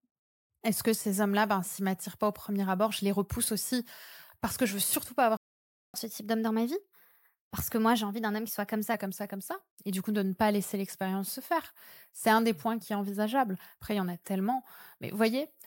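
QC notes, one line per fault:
5.37–5.94 s, playback stall: directly after "je veux surtout pas" the speech cuts out to silence for about 570 ms. A gap this long in mid-flow is most likely the player running dry of buffered data or having its output thread blocked, so nothing reached the output until it recovered and continued.
5.94–8.94 s, catch-up at higher speed: for three seconds after the stall the speech runs at 1.1 times normal speed, with pitch raised by roughly a semitone and a half, giving a slightly hurried, higher timbre. By "comme ça comme ça" it has settled back to normal rate and pitch. This is the player resampling its backlog faster to recover the time lost in the stall, so speed and pitch rise together rather than independently.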